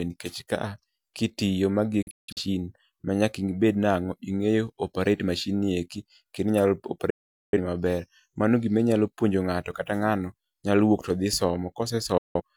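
Speech with three digital broadcast dropouts: the receiver lost frames and muted, with 3 ms fades, at 2.02–2.41 s after "ka a kitiyo magi" (several short holes), at 7.10–7.58 s before "ni maber", and at 12.18–12.41 s. Audio sent during these gaps is lost.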